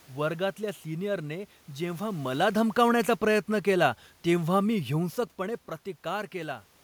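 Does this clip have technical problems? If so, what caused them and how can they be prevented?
Yes. After "सिनियरने जेव्हा", automatic gain falling runs from 2.25 to 5.2 s. The gain control judged the input too loud or its background noise too strong. It lowered its gain gradually, by about 4 dB. Speech and room noise sink together. Setting a fixed input level and switching off automatic gain control prevents this.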